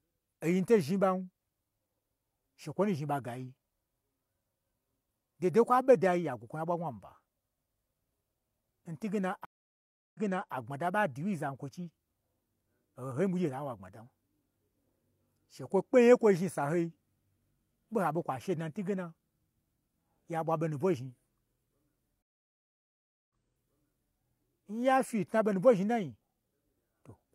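At 9.45 s the speech cuts out for 0.7 s, then resumes 0.38 s earlier, repeating a moment. At 22.22 s a 1.07 s silence returns 0.9 s earlier. Both are stream reconnects: the connection dropped, a fresh decoder restarted, and the server resent recent audio.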